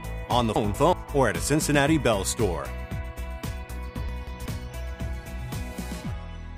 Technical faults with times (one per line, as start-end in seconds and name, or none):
0.56-0.93 chunks out of order
4.09-4.46 chunks out of order